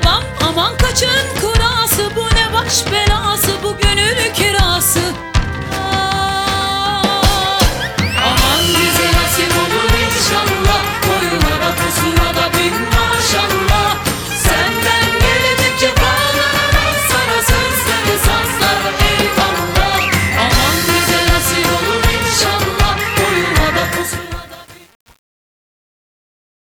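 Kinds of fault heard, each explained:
Truncation distortion on a fade: from 23.9 s the fade-out loses low-level resolution without dither, consistent with a 7-bit stage, turning gritty.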